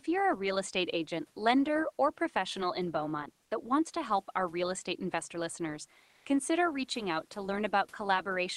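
From 6.07 to 6.23 s, comfort noise in place of the background fills a 160 ms pause. The room noise gives way to a smoother synthetic hiss about 3 dB off in level, likely from Opus discontinuous transmission. Unlike a dropout, the pause never falls silent.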